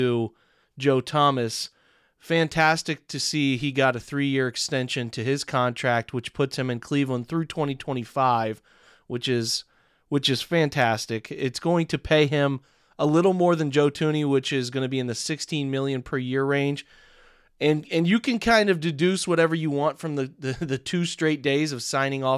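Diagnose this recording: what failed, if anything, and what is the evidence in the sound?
Nothing failed in this recording.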